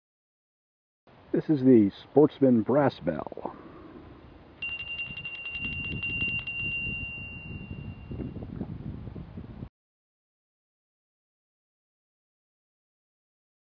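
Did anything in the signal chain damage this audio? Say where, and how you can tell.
No, nothing in the signal chain has left an audible mark on this audio. At no point in the clip can any stage of the path be heard altering the sound.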